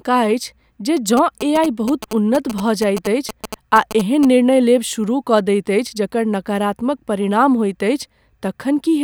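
A nearby 2G phone's GSM signalling bursts are rectified by the audio circuitry of this speech recording from 1.17 to 4.25 s, adding a galloping dit-dit-dit of short 216.7 Hz buzzes roughly 10 dB below the speech.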